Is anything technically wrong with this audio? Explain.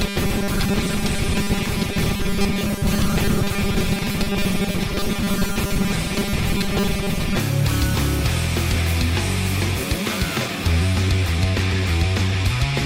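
Yes. From 0.005 to 7.37 s there is robotic sound from repeated short buffers. It is likely caused by audio arriving too slowly, with the last 5 ms looped to fill gaps and about half the material replaced. That imposes a rigid, metallic 200 Hz buzz over the sound.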